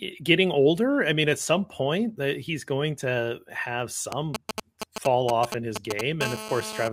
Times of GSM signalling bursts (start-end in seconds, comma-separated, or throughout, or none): 4.12-6.01